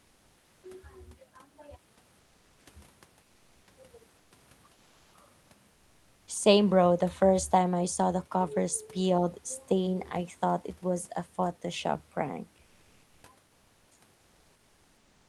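Comfort noise in place of the background appears in the speech pauses at 2.19–2.65 s, 4.17–4.31 s, 4.73–5.13 s, 5.41–5.49 s, 12.63–13.23 s and 13.47–13.91 s. In each gap the real room background, about 40 dB below the loudest speech, gives way to a flat, featureless hiss, between about 1 dB louder and 3 dB quieter. This is likely Opus discontinuous transmission: the sender paused and the receiver filled the silence with synthetic noise.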